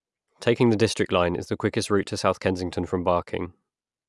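No audible technical faults anywhere in the speech, with no dropouts, clicks, distortion or level problems at any point.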